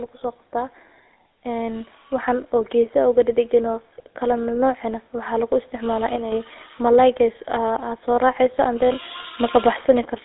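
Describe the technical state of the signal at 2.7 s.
At 2.7 s the automatic gain is rising, partway through a swell that runs from 1.43 s to 3.61 s. The gain control judged the input too quiet and is turning it up slowly. The level climbs by about 4 dB over that span. Voice and background noise swell together, so the room grows along with the speech. The increase is gradual, not a step.

Under that, the GSM full-rate codec colours the whole clip, including this moment. The codec models the vocal tract and drives it with a sparse train of regular pulses instead of the real excitation. That gives the voice a buzzy, gravelly roughness that is plainly audible. The band sits at roughly 300 Hz to 3.7 kHz, with nothing above 3.8 kHz. This fits a 13 kbps GSM stream.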